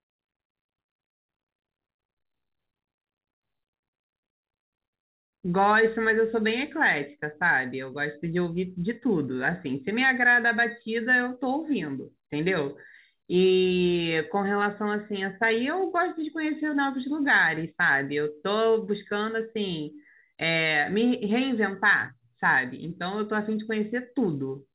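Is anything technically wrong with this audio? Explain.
No, nothing is technically wrong with this speech recording. It has the narrow, telephone-like sound of a call path, with nothing above 4 kHz, which fits G.711 mu-law coding at 64 kbps.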